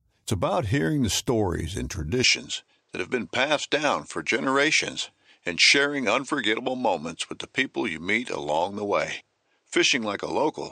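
Partway through this speech recording the input most likely switched to a poorer device, at 2.24 s, just after "hearing the stories and", and the recording stays on it to the end. There is no gap at the switch, and the level stays about the same, but from that point nothing reaches above 8.9 kHz, so the voice loses its air and turns slightly dull. A new, faint background noise also appears, sitting roughly 50 dB below the speech.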